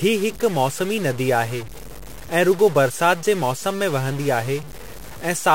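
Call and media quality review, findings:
Harsh, buzzy distortion across the whole clip; pauses between speech filled with steady noise. Likely stuck bit in the data path or converter, one bit held fixed so about half the samples are off by a step around -30 dBFS.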